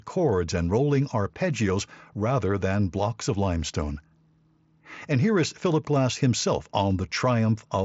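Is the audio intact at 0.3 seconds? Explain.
Yes, the speech at 0.3 seconds is intact, with no fault at that moment beyond the Bluetooth mSBC headset codec carrying it as normal, band-limited to about 7.7 kHz.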